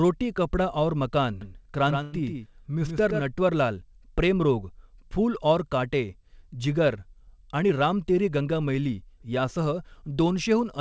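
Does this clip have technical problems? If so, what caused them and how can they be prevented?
Yes. Right after "कपडा और मकान", from 1.41 to 3.21 s, there is a doubled audio track: a second full-band copy of the speech sits roughly 150 ms behind, about 5 dB quieter, with no reverb tail, and it begins and ends abruptly. The likely cause is the same signal being picked up again through a slower route, such as a monitor or loopback feed. On a spectrogram every harmonic pattern appears twice, offset horizontally, and the waveform shows a stepped edge where the copy switches on and off. To prevent this, route each source into the mix only once and mute any return or loopback path.

Inside that passage, from 2.03 to 2.21 s, there is a short stall from a late packet. A packet missed its playout time, the jitter buffer emptied, and the receiver stretched the preceding sound by about 96 ms until the data arrived. 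Nothing is lost, but one sound is held unnaturally long, with a faint buzz or dip. On a spectrogram it looks like a frozen, horizontally smeared patch, and the waveform shows repeated near-identical cycles. A larger or adaptive jitter buffer, or a steadier network path, prevents this.

From 7.27 to 8.53 s there is a jitter buffer speed-up. The buffer had built up extra audio, so the receiver repeatedly cut out short pitch-period segments, about a tenth of a second in total. The speech plays roughly 8% fast at unchanged pitch and sounds hurried. The spectrogram shows compressed syllable spacing with no shift in harmonic frequencies, and the waveform has slightly shortened periodic stretches. Reducing network jitter bursts, or draining excess delay more gradually, prevents this. The G.722 call path itself leaves nothing above 8 kHz.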